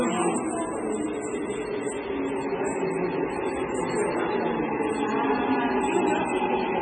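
From start to finish the audio has a hard treble ceiling, with nothing above about 9.1 kHz, plus a watery, swirling texture and smeared attacks. That's likely heavy MP3 compression at a very low bitrate, fitting something near 16 kbps, dropping weak frequency lines frame to frame.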